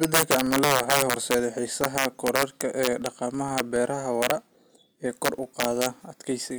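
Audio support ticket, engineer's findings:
Filter restarted on every block, throughout: low buzz at about 21.5 Hz tracking speech level. Fits a 2048-sample block; filter state cleared each block, so every block starts from silence with a small transient. Ticks rise and fall with loudness, steady rate. Probable component: block-based filter stage missing state carry-over between calls. Fix: persist delay-line/state variables across blocks.

Integer overflow, 0.03–1.34 s, 1.84–3.06 s, 3.58–3.60 s, 4.22–4.31 s, 5.25–5.86 s: violent cracks on loud peaks, far harsher than clipping. Peaks pushed about 8 dB over limit in first span, about 6 dB in second, about 2 dB in rest; samples wrap to opposite sign instead of saturating. Probable component: gain/summing stage without clamp.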